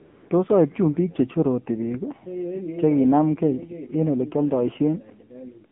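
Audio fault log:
throughout: AMR narrowband mobile codec. The speech is squeezed through a narrowband phone channel, so nothing survives below about 150 Hz or above 3.4 kHz, leaving a thin, boxed-in tone with no air or sibilant sparkle. Within that band the voice is rebuilt from a vocal-tract model excited by a handful of pulses per short subframe, and the coarseness is plainly audible as buzz and a synthetic edge, which fits a low AMR-NB mode around 7.4 kbps.
0.00–0.30 s: AMR comfort noise. For the first 295 ms no speech frames arrive, and the receiver fills the gap with generated noise built from a rough estimate of the background's level and spectral shape. What you hear is a smooth, featureless hiss rather than the real room sound, and it switches over abruptly to the coded speech once actual frames resume.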